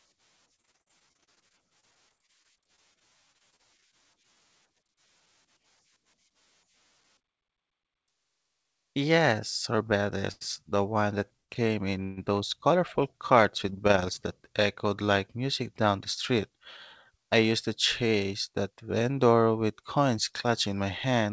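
Speech, carried over a call path whose G.722 coding leaves nothing above 8 kHz, so the spectrogram shows a hard ceiling there. From 0.56 to 3.84 s there is repeated packet loss (robotic sound): gaps of up to 50 ms, each patched by extending the previous sound, recur about every tenth of a second, with about 17% of that span concealed. The result is choppy, with pieces missing. The spectrogram shows repeated smeared, flat-topped harmonic stretches, and the waveform has short blocks where the envelope stops tracking the speech. A jitter buffer speed-up at 7.20 to 7.52 s runs about 12% fast at unchanged pitch. Roughly 50 ms is trimmed in pitch-period slices, and the speech sounds briefly hurried. A second speed-up from 17.10 to 18.71 s, ending just before "vendor with coins", runs about 7% fast and trims around a tenth of a second. Neither shows a visible seam, only compressed syllable spacing. 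At 10.32 to 10.43 s comes a short stall from a late packet: a sound is held for 92 ms with a slight buzz or dip, and nothing is lost. The waveform shows a periodic repeating patch. Just after "one that", from 11.37 to 11.51 s, a call audio freeze inserts about 114 ms, which fades almost at once into roughly 110 ms of silence. The likely cause is a delayed packet burst emptying the jitter buffer. A second freeze from 12.03 to 12.19 s, right before "those colorful", adds 136 ms of fading buzz or hiss with no silence. Both appear as inserted stretches, with the speech resuming where it stopped.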